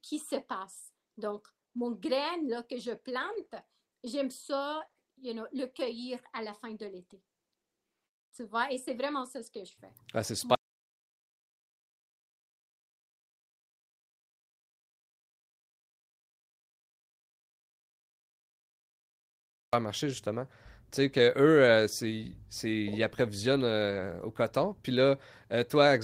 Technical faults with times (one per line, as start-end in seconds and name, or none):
3.17-4.95 scattered short gaps
9.67-9.73 lost packet rebuilt from error correction
9.75-9.79 short concealed packet loss
10.55-19.73 audio dropout to silence
23.87-24.01 lost packet rebuilt from error correction